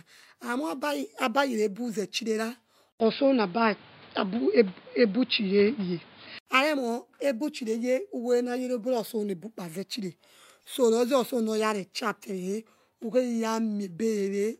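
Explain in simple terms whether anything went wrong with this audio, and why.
From 2.92 to 6.47 s the sound turns dull and muffled after a brief gap, then clears. This is most likely an input switched to a poorer device, which drops everything above 5.1 kHz.

Short, faint glitches at 7.41 s and 10.62 s are a corrupt frame decoded. Damaged data was played anyway, putting sound at the wrong pitches for a moment.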